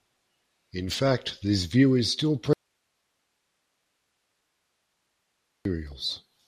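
A speech recording with two faults. The signal path was likely interrupted from 2.53 to 5.65 s while the downstream chain stayed live, giving an audio dropout to a faint residue: for 3.12 s only hiss remains, about 50 dB below the speech. Then weak DAB reception let bit errors slip past error correction into the MP2 data, causing DAB burbling from 5.92 to 5.97 s. Short blips of noise appear in individual sub-bands over the speech, which points to 7 damaged frames at an error rate well under one percent.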